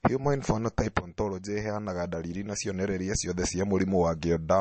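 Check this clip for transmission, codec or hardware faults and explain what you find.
One codec fault runs through the whole speech clip. From start to end, MP3 compression is likely: nothing survives above 8.3 kHz, and starved frequency lines flicker on and off. This gives a watery, swirly texture that a plain low-pass filter wouldn't produce, and it fits a low bitrate near 37 kbps.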